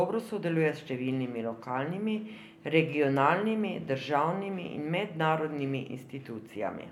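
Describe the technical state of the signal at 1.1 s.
At 1.1 s the speech signal is intact, with no audible fault at that moment.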